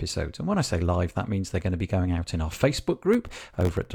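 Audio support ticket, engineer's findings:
Processor overload crackle, 3.14–3.85 s. Gritty tearing over the speech. Audio thread missing deadlines repeatedly; around thirty sub-millisecond buffers dropped to silence. Waveform: dense run of hard-edged silent gaps. Spectrogram: broadband vertical streaks throughout. Likely host CPU load.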